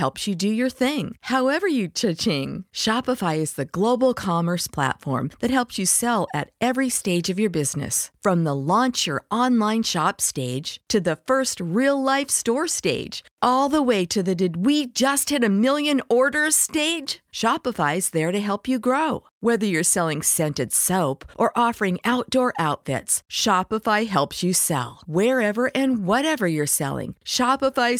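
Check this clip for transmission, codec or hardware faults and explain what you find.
Checking the clip turns up no faults to explain.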